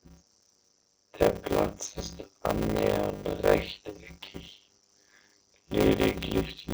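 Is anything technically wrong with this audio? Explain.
Yes. A block size mismatch (padded) runs through the whole speech clip. One stage delivers shorter blocks than the next stage collects, and the unfilled remainder of each block is padded with silence. The result is a 100 Hz buzz from those regular gaps, and the speech plays at about 0.53 times its normal speed while keeping roughly its natural pitch. That pattern fits 256-sample blocks being written into larger blocks of around 480 samples.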